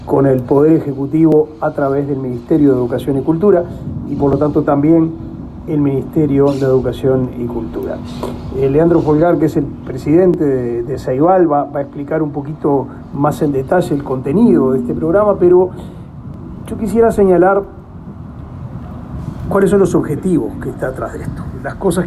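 A regular click recurs every 3.01 s from 1.32 s to 19.35 s, about seven in all. These are likely clock drift buffer slips: two clocks disagreeing by roughly 500 ppm, so a buffer periodically drops or repeats a block of several dozen samples.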